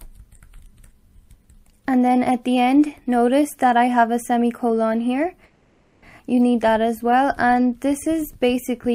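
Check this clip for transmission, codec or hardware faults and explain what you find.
One fault is present: a call audio freeze from 5.45 to 6.04 s, where the last sound is stretched into a fading buzz, likely from delayed packets draining the jitter buffer. Nothing is lost; playback resumes where it stopped, 570 ms later. A spectrogram shows a smeared, decaying band; the waveform shows a tapering envelope.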